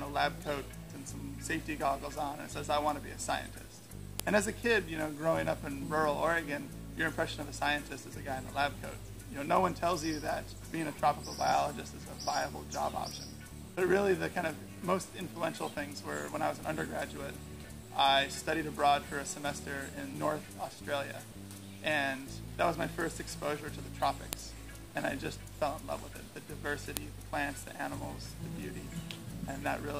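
Sharp, loud clicks land at 4.20 s, 24.33 s and 26.97 s, each a file header played as audio: a joined piece kept its header bytes, which play as samples. On a waveform each shows as a brief spike, and on a spectrogram as a thin vertical broadband line.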